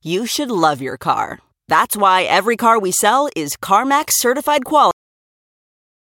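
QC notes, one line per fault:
4.91 s to end, cut-off end: the final stretch of buffers never reached the output, so playback stops abruptly partway through the speech rather than letting it finish. At 4.91 s the sound ends mid-utterance with no natural decay or fade, dropping straight to digital silence. That dead silence then runs for the remaining 1.28 s, where the missing audio should have been written and played.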